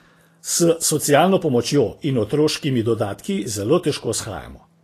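A speech clip whose encoding has likely passed through Vorbis compression at a low bitrate, around 35 kbps, throughout. The coarse treble quantisation and lowered cut-off are plainly audible: upper frequencies turn to grainy hiss, tones sound roughened, and consonant attacks are blurred.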